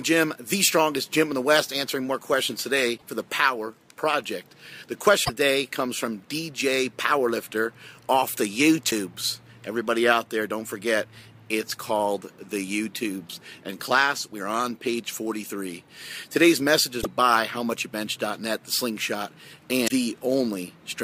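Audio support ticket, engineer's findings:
Damaged data in a compressed stream: short chirps and blips at 2.94–3.03 s, 5.21–5.30 s, 8.87–8.92 s, 16.99–17.06 s and 19.84–19.91 s. Probable component: the compressed file or stream. Corrupt frames are misread by the decoder, which loses sync until the next frame header.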